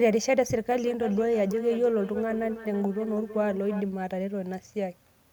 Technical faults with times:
0.73-3.88 feedback echo between two devices

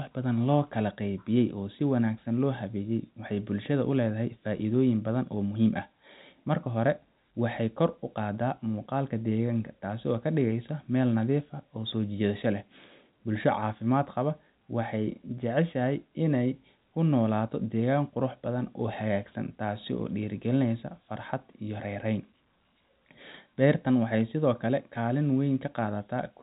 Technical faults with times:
none

